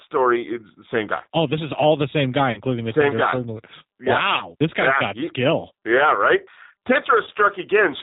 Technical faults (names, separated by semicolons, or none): G.729 codec; VoIP packet loss concealed by the speech codec